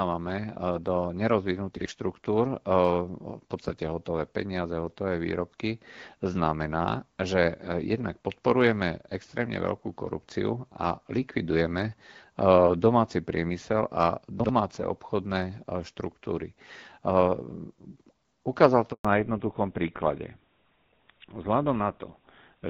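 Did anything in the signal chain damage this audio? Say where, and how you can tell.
Yes. At 1.77 to 1.86 s and again at 14.40 to 14.49 s, the buffer or driver stage plays chunks out of order. A block of about 46 ms sounds one slot late, giving a brief jumbled stutter with three hard joins. Unlike a dropout, no audio goes missing.

From 18.93 to 19.05 s, a handover gap in the network stage cuts the speech for 120 ms. It dies away within tens of milliseconds, sits silent, then resumes. This is a clean hole with no concealment noise, which sets it apart from packet loss, and the sound changes afterwards.

From 19.05 s to the end, the codec stage shows a fallback to narrowband. The call leaves AMR-WB at 12.65 kbit/s, which is only lightly coloured earlier, for GSM full rate, so nothing remains above 4 kHz and speech turns duller and rougher. This is a lasting band limit rather than a momentary fault.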